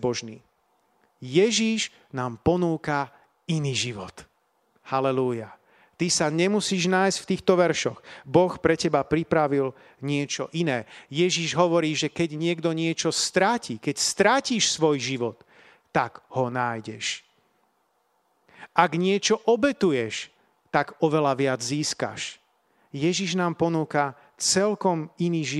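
No technical faults can be heard anywhere in the recording. The speech continues without any audible interruption or defect at any point.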